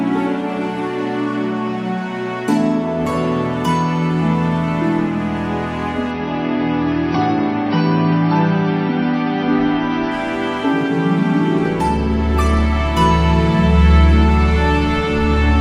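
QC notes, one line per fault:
6.11 to 10.11 s, adaptive stream at a lower bitrate: the connection slowed and playback switched to a leaner encode, which fits a step from about 96 down to 24 kbit/s AAC. Treble vanishes abruptly with no gap, and artefacts thicken. A spectrogram shows a hard ceiling at 6 kHz across that span.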